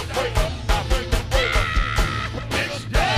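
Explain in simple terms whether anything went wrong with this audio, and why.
Two short glitches come from damaged data in a compressed stream, at 0.47 to 0.49 s and 2.37 to 2.39 s. Part of the stored file was corrupted. The player misread those bits and briefly lost its place, causing a quick chirp or blip.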